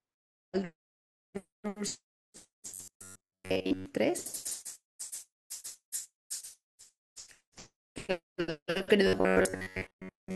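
Robotic sound from repeated short buffers appears from 2.71 to 3.86 s and again from 9.07 s to the end. The speech becomes a rigid metallic buzz near 94 Hz, likely from a roughly 11 ms buffer being replayed for most of that time while fresh audio is skipped.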